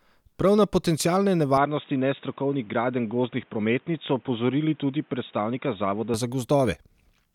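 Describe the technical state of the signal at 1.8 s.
At 1.8 s the sound is dull and band-limited, with nothing above 3.8 kHz. From 1.57 to 6.14 s, after "na potencialne", the input likely switched to a poorer device. Unlike a plain filter, a new background noise appears about 35 dB down, with no gap.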